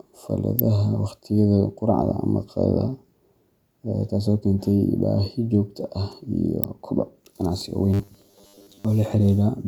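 A speech clip with two kinds of fault. Sharp snaps at 0.59 s and 6.64 s sound like an electrical switching spike, likely a nearby switch or static discharge arcing into the line. From 7.94 to 8.85 s the voice becomes a rigid metallic buzz at 100 Hz, the robotic sound from repeated short buffers, likely caused by 10 ms chunks being replayed while about half the real audio is skipped.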